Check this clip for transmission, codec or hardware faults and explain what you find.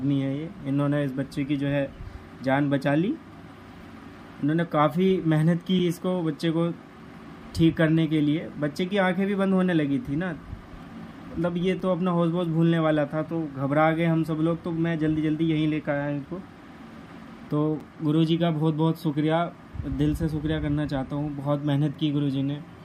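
One fault shows up, three times: a gap between chunks. Short holes of silence appear at 5.79, 11.80 and 17.80 s. Each lasts 6.5 ms. They recur every 6.0 s. This points to the audio being delivered in 6-second chunks, with silence inserted at every join. No sound is lost. It is pushed later instead. Each hole is heard as a brief dropout.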